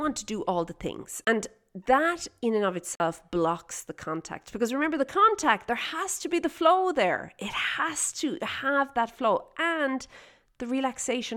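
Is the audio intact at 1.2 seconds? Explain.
No. The speech cuts out abruptly at about 1.25 s and drops to about 24 ms of silence, running to 1.27 s, before resuming. This is likely a Bluetooth stall: radio interference delayed packets on the wireless link, the headphones' small buffer emptied, and playback sat silent until the retransmitted audio arrived.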